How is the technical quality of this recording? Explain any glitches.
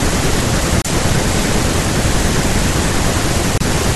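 The speech is interrupted twice by short gaps. From 0.82 to 0.88 s and again from 3.58 to 3.62 s, the sound cuts to silence and then resumes further along, as if it had kept playing. This is likely a Bluetooth dropout: packets reached the headphones too late and were discarded. Each gap fits about 28 ms of lost audio, roughly two wireless frames.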